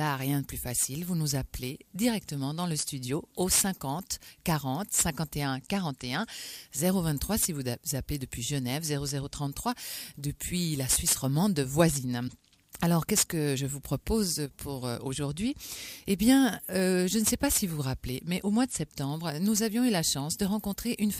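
At 12.27 to 12.30 s the audio jumps forward with a brief glitch lasting about one 26 ms frame, likely a broken MP3 bit reservoir, where a frame after a cut reads stale bytes. A spectrogram shows a thin vertical disturbance, and the waveform shows a discontinuity.

From 14.46 to 14.51 s, one channel drops out, likely cutting one side of the stereo feed, so the mono sum falls by about 6 dB for 50 ms. The waveform shows a sudden, brief dip in the envelope, and the spectrogram shows a faint, full-band vertical band of reduced energy.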